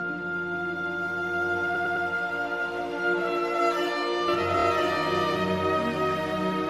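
The audio has repeated frames: a 104.5 ms block plays three extra times from 1.74 to 2.05 s, adding 313.5 ms, and a 26.1 ms block repeats twice at 4.59 s. Both show as identical vertical slices on a spectrogram. From 4.28 s to the end, a doubled audio track sits at roughly equal level about one second behind, visible as a full-band duplicate pattern that starts abruptly, likely from a second, slower capture path or an edit holding two offset copies.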